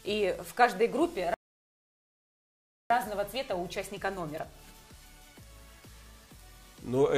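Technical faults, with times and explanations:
1.34–2.90 s, playback stall: the sound cuts to silence for about 1.56 s, then carries on, likely because the player ran short of data or its thread was blocked.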